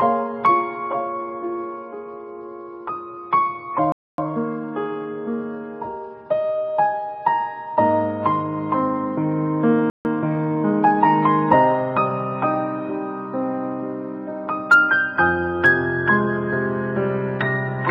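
The audio cuts out twice in mid-flow, from 3.92 to 4.18 s (about 260 ms of dead air) and from 9.90 to 10.05 s (about 150 ms). Those are playback stalls, likely the player running dry or its output thread getting held up, so nothing reaches the output until it recovers. Each gap is followed by time-compressed catch-up while the player works off the backlog, trimming small slices and cross-fading across the joins. After the first stall that runs from 4.18 to 4.44 s at double speed, so it sounds really rushed. After the second it runs from 10.05 to 11.03 s at 1.15 times speed, a gentler hurry. In both cases the pitch stays put.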